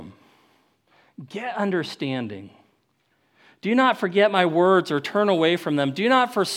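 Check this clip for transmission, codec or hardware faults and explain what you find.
One fault turns up near the end. From 4.36 s, just after "not forget", to the end, the speech turns thin, bright and sibilant. That is pre-emphasis left on: the treble boost, which fits the CD 50/15 µs curve, was never undone, leaving about 8 dB extra at 10 kHz.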